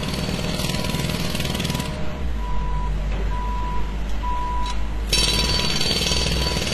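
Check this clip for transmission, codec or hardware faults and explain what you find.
One codec fault runs through the whole clip. Transcoding between lossy codecs is present from start to finish. Nothing remains above 12.8 kHz, and different compression artefacts layer on each other. This is likely a chain such as AAC-LC, then WMA, then HE-AAC at roughly 24 kbit/s. A spectrogram shows a hard ceiling at 12.8 kHz with smeared, blocky texture below.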